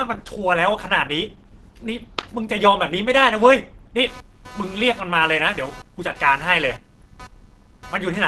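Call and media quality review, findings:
Opus compression, throughout: speech muffled and hoarse, nothing above about 12.1 kHz, codec damage plainly audible. Likely an Opus encode at 16 kbps in hybrid mode: too few bits, so the encoder narrows bandwidth and leans on its speech coder.

Computer activity noise, 4.07 s to the end: buzz pulsing at roughly 300 Hz, around 25 dB under the speech, tracking machine load rather than the audio. Processor or graphics load shifts the shared ground of the audio circuit.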